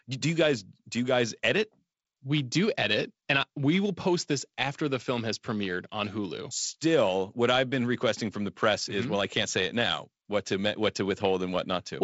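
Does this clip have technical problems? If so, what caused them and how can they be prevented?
No, there are no technical problems in this speech clip. It carries the band limit of G.722 wideband telephone coding, with nothing above about 7.7 kHz, and the 48 kbit/s rate leaves only light coding grain.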